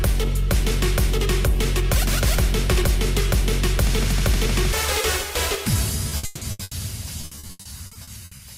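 Late in the audio, from 6.09 to 6.73 s and again from 7.21 to 8.41 s, the sound turns choppy and robotic, with pieces missing. This is repeated packet loss: each dropout is patched by stretching the last sound, leaving holes up to 160 ms long.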